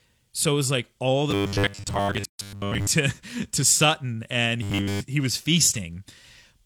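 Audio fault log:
1.31–2.87 s and 4.63–5.01 s, robotic sound from repeated short buffers: The speech becomes a rigid 100 Hz metallic buzz, most of the first stretch and all of the second, ending just before "he was". This likely comes from audio arriving too slowly, so a 10 ms buffer is replayed.
2.25–2.39 s, gap at a join of encoded pieces: A 142 ms gap with smeared edges opens mid-speech, then the sound resumes. The untrimmed encoder delay and padding at the join fit separately encoded 6 s pieces.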